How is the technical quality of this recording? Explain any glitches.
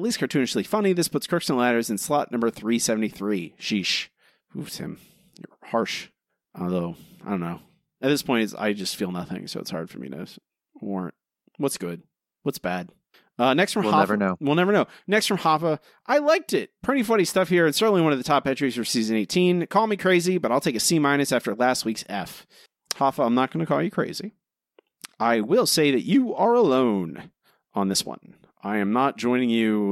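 The speech recording has no technical glitches to explain. Nothing in it stands out as a fault at any point.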